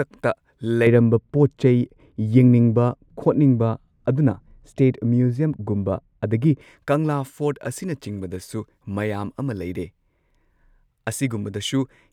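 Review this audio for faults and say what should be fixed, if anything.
From 0.87 s to 6.61 s the speech turns dull and muffled, the signature of de-emphasis applied wrongly: a treble-cutting filter meant to reverse pre-emphasis has been run on audio that never had any, or a second time. The loss rises gradually with frequency, reaching about 11 dB at 10 kHz relative to 1 kHz. Unlike a low-pass filter or a codec dropping its top band, there is no sharp cutoff. The whole upper range slopes away smoothly. Track the emphasis state with the audio so the de-emphasis filter runs exactly once, and only on material that was pre-emphasised.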